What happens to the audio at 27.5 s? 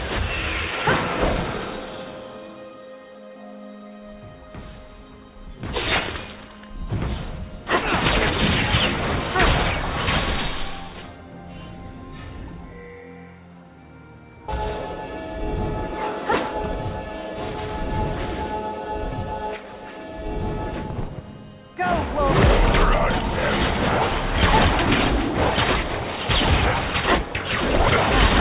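Nothing goes wrong at 27.5 s; the audio there is intact, carried through the call path with its telephone-band sound, which fits G.711 mu-law coding with nothing above 4 kHz.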